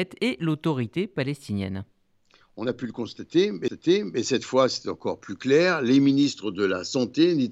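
At 3.68 s, just after "a pu le", the speech has a CD skip. The laser lost its track and landed on another turn of the disc's spiral. The player muted for a couple of milliseconds, heard as a small tick. Playback then resumes from a different point on the disc, so the flow of speech jumps abruptly. It picks up again with "cette fois c'est encore".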